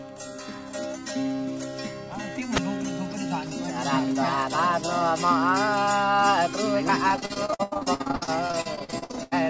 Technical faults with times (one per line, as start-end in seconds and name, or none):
7.08-9.33 repeated packet loss (robotic sound)